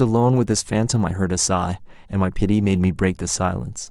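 Throughout the recording, the sample-rate conversion from 44.1 kHz to 48 kHz was done with the resampler restarted on every block, each roughly 40 ms long. At every block boundary the converter lacked the true neighbouring samples, so each edge picks up a small error. In this speech, that surfaces as a steady train of faint ticks at 25 Hz, close to a low buzz, riding on the speech and falling away in the silences.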